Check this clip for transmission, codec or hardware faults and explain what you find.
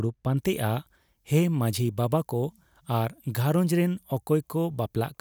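One fault is present. Pre-emphasis left on, from 0.37 s to the end: a 75 µs FM treble boost was never undone by its matching de-emphasis, leaving 10 kHz about 14 dB above 1 kHz, so the speech sounds thin, bright and harshly sibilant.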